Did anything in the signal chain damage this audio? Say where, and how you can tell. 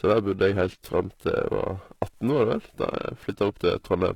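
Yes, two stages left audible damage. The first is the codec. Throughout the speech, the treble has a gritty, metallic sheen, and s sounds come out lispy. Nothing is present above about 14.9 kHz. That points to HE-AAC compression, likely at a low bitrate around 20 kbps. The upper band is rebuilt by copying lower harmonics upward under a coarse envelope, so they no longer align. A plain low-pass would sound dull rather than synthetically bright like this.

The second is periodic clock jitter at the converter. The sampling clock is being wobbled at roughly 1 kHz, which puts sidebands about that far above and below every component of the speech. The result is a rough, buzzy edge that is strongest on higher-frequency content. Codec grit clusters in the top band, but this roughness tracks the whole signal and drops out completely in pauses. That is how it is told apart from additive interference or noise.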